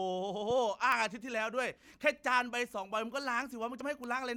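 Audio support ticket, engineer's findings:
Loud pop, 0.50–0.53 s: single pop peaking about 5 dB above the speech, speech continuing underneath. Likely a voltage step from a plug, switch or static discharge entering the analogue chain, shaped into a short thump by downstream circuitry.

Bit error spikes, 0.92 s, 3.23 s and 4.04 s: isolated sharp ticks, broadband, unrelated to the speech. One sample jumps at 0.92 s and 3.23 s, two consecutive samples at 4.04 s. Consistent with flipped bits in memory or on a digital link.

Audio missing between chunks, 1.83 s and 3.81 s: short skips, roughly 30 ms of speech lost at each, with the two sides joined directly and no silence. The 2 s spacing likely points to chunked capture or processing dropping audio at each chunk handover.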